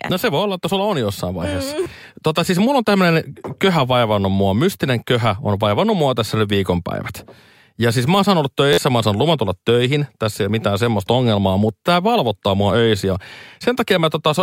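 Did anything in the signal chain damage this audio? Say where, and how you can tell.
Yes, at the driver or buffer stage there are two repeated-buffer faults. At 1.83 s an 11.6 ms piece sounds three times in a row, and from 8.73 to 8.78 s, after "siis mä saan olla" and before "mä saan luvan tulla", one sounds five times. The 11.6 ms period fits a 512-sample buffer. The device replayed stale data when fresh audio arrived late, losing roughly 20 ms and 50 ms. Exact repeats with hard joins, rather than silence or a smoothed fill, separate this from a dropout or packet-loss concealment.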